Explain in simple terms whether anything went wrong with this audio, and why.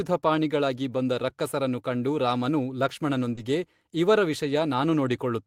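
Two things went wrong, both from a shaky network connection.

At 2.25 to 2.27 s, just after "ಬಂದ ರಕ್ಕಸರನ್ನು ಕಂಡು", and again at 3.37 to 3.39 s, there's a lost packet rebuilt from error correction. The next packet carried a cheaper backup copy, so there's no gap, just a brief rougher, noisier patch.

Around 3.35 to 3.39 s there's also a short concealed packet loss. About 20 ms never arrived, and the receiver guessed by stretching the preceding sound, which leaves a quick smear or wobble.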